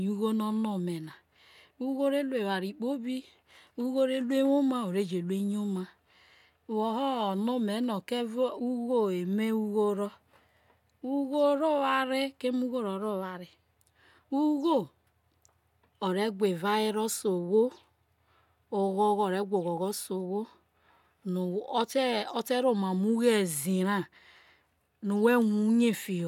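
Nothing technical goes wrong anywhere in this speech recording, so there's no fault here to walk through.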